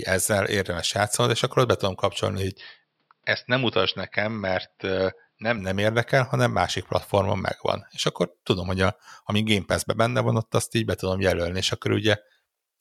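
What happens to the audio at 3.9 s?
At 3.9 s the sound sits inside a stretch from 2.56 to 5.58 s, after "ott be tudom kapcsolni" and before "nem érdekel hanem másik", where it turns dull and boxy, most likely because the input switched to a poorer device. That narrower-band input passes nothing above 5.5 kHz, so a spectrogram shows the upper band abruptly emptied, plus a faint new noise floor. The switch has no silent gap, and the waveform's loudness barely changes.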